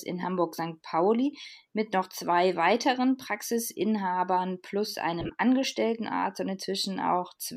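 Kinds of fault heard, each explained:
Lost LE Audio frames: the LC3 decoder covered dropped Bluetooth frames by repeating the last spectrum with random signs, smearing speech into noise. This happens for 37.5 ms just before "mit noch zwei weiteren", then in scattered short losses from 5.20 to 5.30 s.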